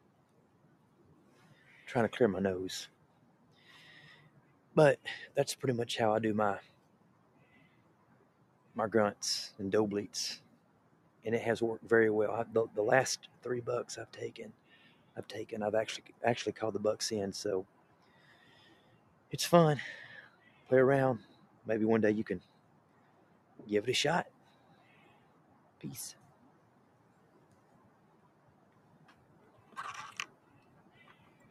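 Across the whole clip the level pumps and flutters: sustained parts and decaying tails keep sinking while sudden onsets break through, with the gain swinging by roughly 20 dB. This is a noise suppressor applied to music or sounds. A processor designed for speech treats steady tones, ambience and reverb as noise and pulls them down, so anything held or fading loses body and sounds thinned out.

Sound is cut by the noise suppressor in six stretches: 3.01 to 4.72 s, 6.78 to 8.63 s, 10.57 to 11.20 s, 14.55 to 15.08 s, 17.68 to 19.30 s, and 22.53 to 28.88 s. In each, the audio dips by about 4 dB at its deepest. The dip covers well under a second in most stretches, only a brief moment around 14.6 to 15.1 s, and a few seconds in total within the long final stretch. The suppressor judged these passages to be noise and attenuated them more than their surroundings.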